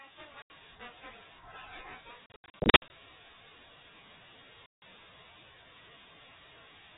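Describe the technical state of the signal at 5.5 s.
At 5.5 s the speech passes cleanly through G.711 telephone coding with no fault, carrying only the usual telephone band limit below 4 kHz and a faint level-following quantisation hiss.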